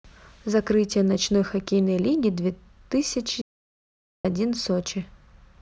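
In this speech recording, the sound cuts off abruptly at 3.42 s and returns at 4.25 s, leaving about 0.83 s of dead silence with no room tone. It is an audio dropout to silence, likely from a lost input while recording continued writing silence.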